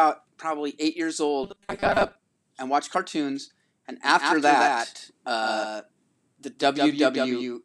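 From 1.44 to 2.16 s, between "probably eight years" and "and watched cartoons and", the speech turns into robotic sound from repeated short buffers: a rigid metallic buzz at 200 Hz, likely from a 5 ms slice repeating while roughly half the real audio is skipped. A spectrogram shows evenly spaced 200 Hz harmonic lines.

From 4.03 s, just after "and watched cartoons and", to the end, a doubled audio track appears. A full-band copy about 5 dB quieter trails by roughly 150 ms, with no decay, likely from a second, slower capture path. The waveform shows each syllable shadowed by a smaller, identical one.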